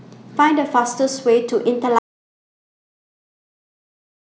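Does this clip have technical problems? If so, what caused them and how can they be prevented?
Yes. An audio dropout to silence begins at 1.99 s and runs to the end. The speech cuts off into total silence, showing as a flat line on the waveform and a blank spectrogram. The input was likely lost while recording continued. Monitoring input levels and securing connections prevents this.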